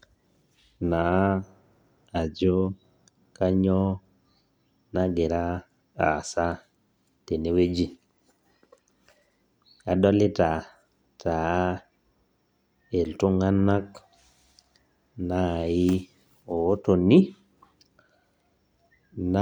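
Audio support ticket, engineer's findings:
Signal path checks out on this speech recording, with no dropouts, distortion, noise bursts or timing discontinuities found anywhere in the capture.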